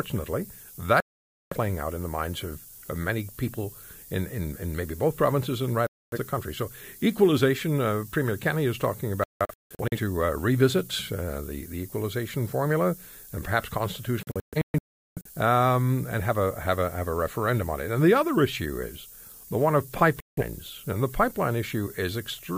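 The speech has been reduced to very few bits, consistent with about 7, with the rounding error pushed upward by noise shaping. The result is a constant thin hiss, roughly 15 dB below the speech, that grows much brighter toward the top of the band across the whole clip.

There are five digital broadcast dropouts, where the receiver lost valid frames and muted: 1.00–1.57 s, ending just before "out in the minds"; 5.87–6.19 s; 9.24–9.97 s, between "is talking" and "to uh", broken into several short holes; 14.23–15.30 s, between "equalization formula and perhaps" and "um and have a", also broken up, its longest gap 0.38 s; and 20.20–20.43 s. Sound is cut to silence, and what was sent meanwhile is never recovered.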